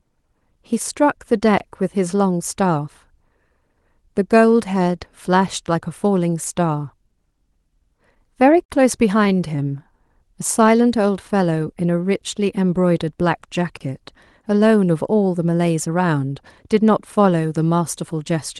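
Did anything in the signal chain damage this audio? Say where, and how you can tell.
Yes. A block of digital silence at 1.58 s (20 ms) and 13.77 s (34 ms): the output buffer likely wasn't filled in time, so the speech drops to silence abruptly.

Repeated stalls (stutter) between 8.15 and 8.71 s: late network packets emptied the jitter buffer four times, up to 50 ms each. Concealment stretched the Opus-coded speech, so it drags and stutters without losing anything.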